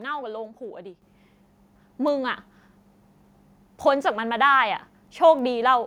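At 1.02 s there's a microphone volume stepped up: the call software decided the mic was too quiet and bumped the device's input gain in one go, by about 7 dB. Speech and room noise both jump louder at that instant and stay there. Then come two bit error spikes, at 2.08 s and 5.39 s, each a single corrupted sample where a flipped bit throws the value off by a power of two before it snaps back. Each one is a sharp broadband tick with no connection to the speech around it.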